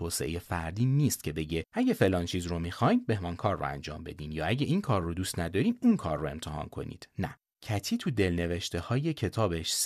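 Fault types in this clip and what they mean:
No faults detected in the speech on this listen.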